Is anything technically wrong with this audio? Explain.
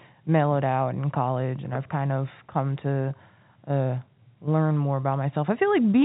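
No, nothing stood out on listening to this speech.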